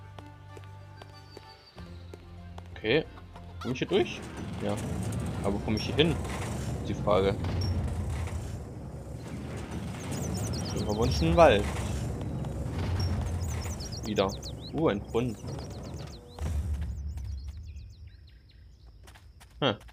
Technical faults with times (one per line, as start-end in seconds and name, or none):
none